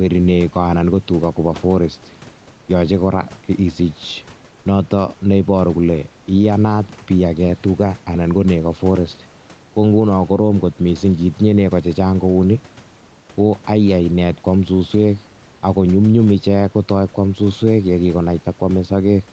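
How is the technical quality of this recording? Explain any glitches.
The recording has one audible problem running through the whole clip: the level pumps. The speech tops out around 8 kHz, which fits a wideband Opus call at about 32 kbps, and the room noise sits about 31 dB below the speech.

Gain pumping, throughout: the level swings by roughly 5 dB. The likely cause is input gain set too high, with a fast limiter or compressor clamping down on every loud syllable and then releasing. That squeezes loud and quiet passages together, so the speech sounds flattened.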